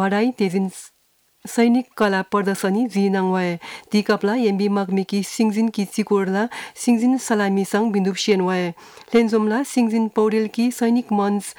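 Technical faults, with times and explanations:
2.01–2.35 s, 8.31 s and 9.15–9.20 s: hard clipping. The peaks exceed the largest level the signal path can pass, by about 3 dB, 2 dB and 4 dB. Their tops are cut flat. This adds high harmonics, heard as brief crackle on the loudest moments.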